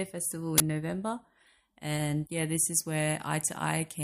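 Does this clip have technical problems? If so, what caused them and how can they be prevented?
Yes: an uninitialised buffer at 0.58 to 0.60 s plays stale memory as a loud 20 ms noise burst, not the silent gap a dropout leaves. Prevent it by zero-filling every buffer before it can reach playback.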